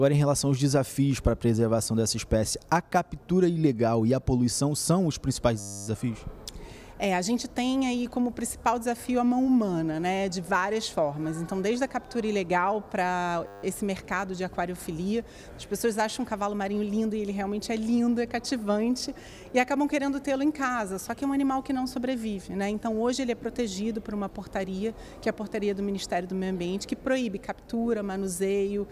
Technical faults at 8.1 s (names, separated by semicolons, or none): none